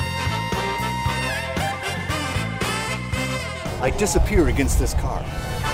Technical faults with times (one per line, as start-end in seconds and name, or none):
3.88 block of digital silence